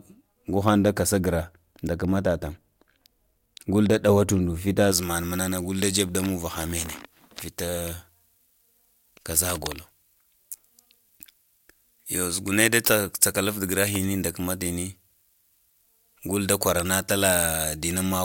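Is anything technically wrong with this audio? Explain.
Yes, there's pre-emphasis left on in this speech clip. From 4.92 s to the end, the treble jumps up. The highs were boosted ahead of recording or transmission, but the matching de-emphasis never got applied on the way back. The tilt is about 11 dB at 10 kHz relative to 1 kHz, which fits a J.17-style curve. So the voice turns thin and overly bright, and the sibilants get hissy and spitty.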